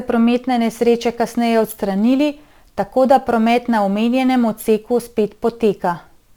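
From 0.63 s to the end, the speech picks up a gritty, inharmonic fizz from crude rate conversion. It likely comes from nearest-sample resampling from 44.1 kHz to 48 kHz, and it sits roughly 30 dB down.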